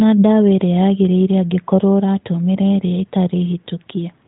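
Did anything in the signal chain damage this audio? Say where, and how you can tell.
No, nothing in this speech stood out on listening as damage from any stage of the signal chain.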